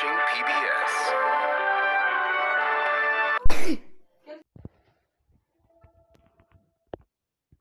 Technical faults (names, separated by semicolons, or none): phantom power thump